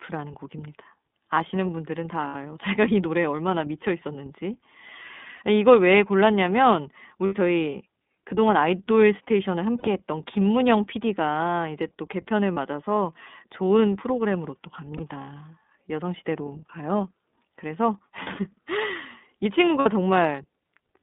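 Throughout the recording the speech runs through the iLBC codec. The band is confined to roughly 200 Hz to 3.6 kHz, and within it the voice carries a plainly audible rough, slightly synthetic grain, a quality that fits a 30 ms frame mode at about 13 kbps. What separates this from a plain telephone band-limit is that grain. Each frame's excitation is coded independently.

Lost iLBC frames interrupt the audio at 2.27, 5.37, 7.26, 9.78, 12.54, 14.97, 18.24 and 19.80 s. Each gap lasts about 30 to 60 ms, which fits one or two missing 30 ms frames. The decoder fills each hole by repeating the last pitch cycle with added noise, so these are heard as a brief held, buzzy or breathy vowel, not as a silent dropout or a click. Because the frames stand alone, the speech recovers almost immediately afterwards, without the lingering distortion that concealment in state-dependent codecs leaves behind.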